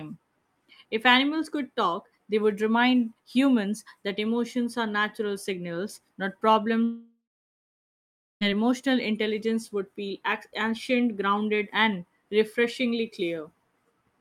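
A long network dropout runs from 6.83 to 8.43 s, starting right after "are natural signals not". The last sound carries on as a fading buzz, then gives way to about 1.2 s of near-silence. Speech resumes at "emotional intelligence would feel", with roughly 1.6 s of the original audio gone. This is likely a stretch of lost packets, with the receiver filling the gap before falling silent.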